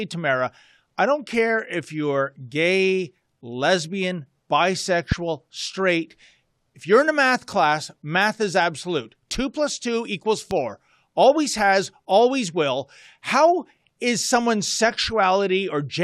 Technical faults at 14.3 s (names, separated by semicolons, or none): none